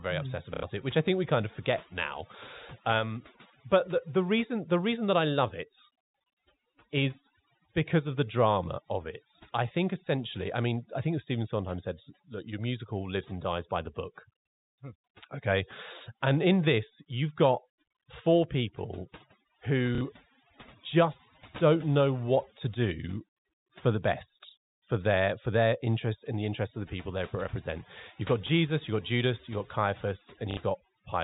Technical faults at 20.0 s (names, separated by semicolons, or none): overdone noise removal; packet loss with last packet repeated